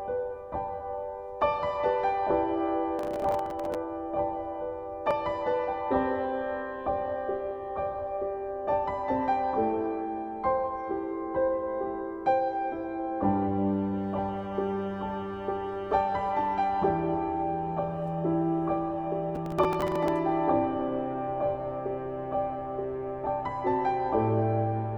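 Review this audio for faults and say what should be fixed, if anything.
Processor overload crackle, 2.99 to 3.75 s and again 19.35 to 20.08 s. In both bursts the processor fell behind and missed many short buffer deadlines in a row. Each miss replayed a scrap of old audio with hard edges, which fits buffers of only a few milliseconds. Dozens of these in quick succession give the gritty tearing that rides on the sound and stops once the load eases. To prevent it, raise the buffer size or reduce competing processor load during recording and playback.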